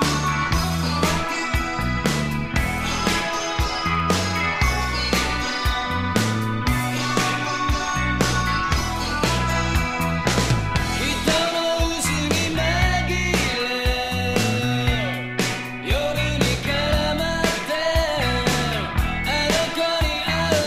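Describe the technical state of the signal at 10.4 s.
At 10.4 s the signal is intact, with no audible fault at that point.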